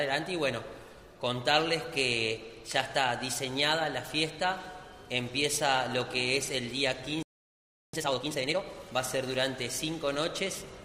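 At 7.23 s the sound cuts out mid-flow. This is a playback stall. Silence lasts about 0.71 s, until 7.93 s. The player likely ran short of data or its output thread was held up. Sound then resumes.

From 7.93 s to 8.63 s comes a time-compressed catch-up. The player trims its backlog by dropping short slices and cross-fading the joins. The audio runs at twice normal speed. Pitch stays the same.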